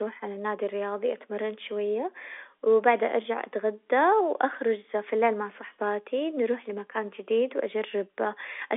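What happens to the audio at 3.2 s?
At 3.2 s the speech passes through intact, carried on the narrow telephone band of the G.711 line with no fault at that moment.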